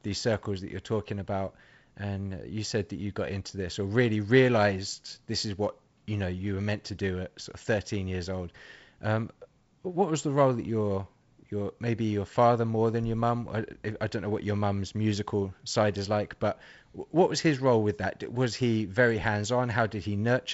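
Nothing in this speech recording stood out as a technical fault on listening.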